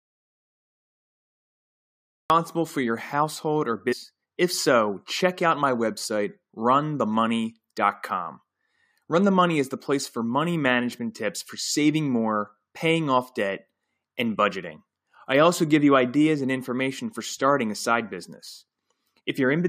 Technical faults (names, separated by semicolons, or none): audio dropout to silence; stream segment skipped